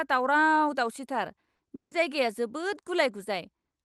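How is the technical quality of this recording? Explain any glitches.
The speech has two network glitches close together. It passed through a call codec, and the top end stops near 12 kHz.

At 1.55 to 1.61 s there is short concealed packet loss. About 40 ms never arrived, and the receiver extended the last sound. It comes out as a brief smear.

From 1.75 to 1.93 s the sound stretches into a fading buzz or hiss, then goes silent before the speech resumes. This is likely a long network dropout, with the missing audio never recovered.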